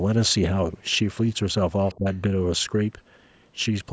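From 1.87 to 1.98 s there's a faint second voice underneath the talker, sitting way down in level, and another brief scrap of it at 2.14 to 2.18 s, even quieter. That's the other side's voice leaking through: the far end is likely playing out of this device's loudspeaker and getting back into the mic, with the echo canceller not scrubbing all of it out. Both bits are short.

Right on the heels of the first leak, from 1.97 to 2.08 s, the talker's own voice takes a sharp, deep dip for about a tenth of a second, then comes back. That's speech suppressed in double talk: with both sides going at once, the canceller likely couldn't tell its own talker from the echo and turned the whole lot down together, so the near voice gets ducked.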